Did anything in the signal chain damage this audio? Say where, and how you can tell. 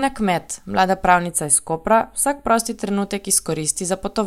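Yes. From 1.27 s to 2.58 s the speech turns hollow and phasey, then returns to normal. That coloration is channel delay (comb filtering): one channel arrives a few samples late, roughly a tenth of a millisecond, and the two are summed to mono at a driver or buffer stage. The shared signal cancels at evenly spaced frequencies, with the first notch somewhere around 5 kHz.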